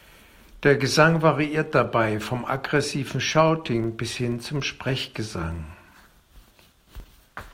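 Throughout the speech runs a 25 Hz buzz from a filter restarted on every block. The filter loses its state every 40 ms, and each block opens with a small transient. Unlike steady mains hum, this ticking rises and falls with the speech level.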